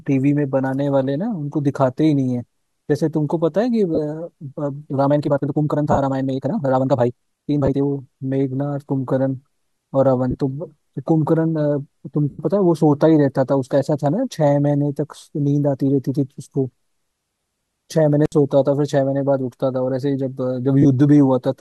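At 3.95 s the first of seven lost LE Audio frames events occurs. The others fall at 5.92, 7.65, 10.31, 12.30, 17.40 and 20.82 s, lasting from 22.5 ms to 90 ms, in steps that fit 7.5 ms LC3 frames. The decoder fills each gap by repeating the last spectrum with scrambled phase, so the speech briefly turns to a noisy smear. The 90 ms gap at 12.30 s is long enough to audibly fade toward silence.

From 5.01 to 7.81 s the speech runs at about 1.77 times normal pace with unchanged pitch, which marks a time-stretched section. The abrupt acceleration sounds rushed, likely from software dropping short segments to shorten the passage. The losses at 5.92 and 7.65 s fall inside it.

At 18.25 s an intermittent contact opens the line for about 63 ms. The audio cuts out with crackle at both edges and leaves faint hiss until the connection returns.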